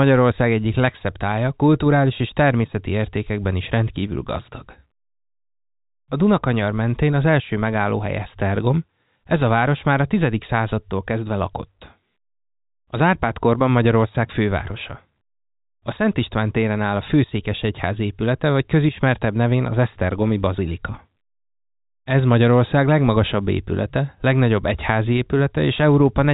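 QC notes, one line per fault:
No faults noted; the speech sits in the narrow band of G.711 telephone coding, with nothing above about 3.8 kHz and only the faint, level-following quantisation hiss that format carries.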